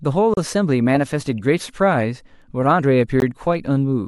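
A gap at a join of encoded pieces opens at 0.34 to 0.37 s in this speech clip, a gap of about 34 ms, and a second, shorter one of about 18 ms falls at 3.20 s. Each time the sound stops with smeared edges and resumes exactly where it left off, which points to separately encoded segments spliced without trimming the encoder's leading delay and final-frame padding.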